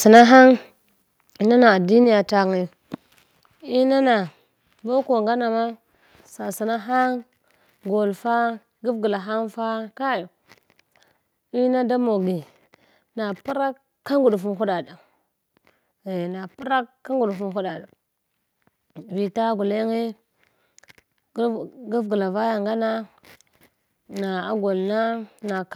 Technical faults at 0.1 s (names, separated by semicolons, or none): microphone overload